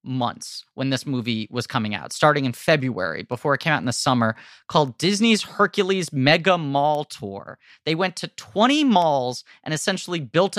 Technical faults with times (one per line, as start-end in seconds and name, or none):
0.22-10.57 word clock ticks